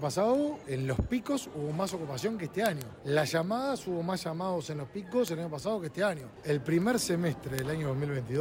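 From 0.20 s to 8.35 s, word clock ticks recur roughly every 0.15 s, about fifty in all. The receiver's free-running clock drifts against the sender's, which suggests an offset near 150 ppm. At each slip one sample is dropped or repeated, producing sharp, uneven clicks.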